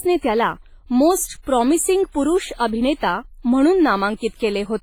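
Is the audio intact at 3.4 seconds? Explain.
No. Likely heavy WMA compression runs through the whole clip. Long transform blocks smear quantisation noise, so the speech rings and sounds washy at 3.4 seconds, with breathing hiss that fits a 24 kbps stream.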